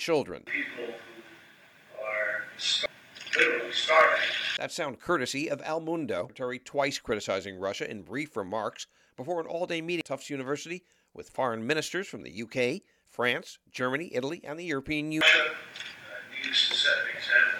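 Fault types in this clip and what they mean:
Damaged data in a compressed stream: bytes in the encoded stream are corrupted, so the decoder misreads those frames and has to resync on the next valid header. Here it comes out as four brief blips, at 2.86, 6.30, 10.01 and 15.21 s.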